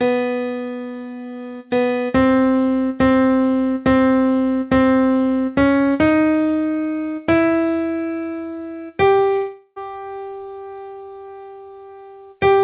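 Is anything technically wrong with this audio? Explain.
Yes. Between 9.36 and 9.79 s there is a long network dropout, likely. The receiver stretches the last sound into a fading buzz for about 0.4 s, then leaves about 40 ms of silence before the audio resumes with that stretch missing. On a spectrogram the fill appears as smeared, repeating bands that fade, then a blank gap. The waveform decays to flat. Everywhere in the clip, the spectrogram stops at 4 kHz, which fits the G.711 call path.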